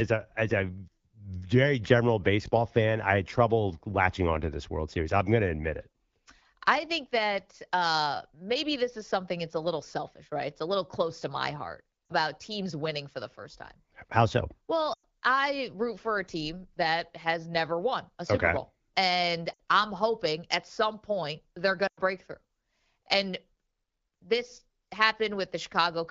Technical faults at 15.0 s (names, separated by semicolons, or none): lost AMR speech frames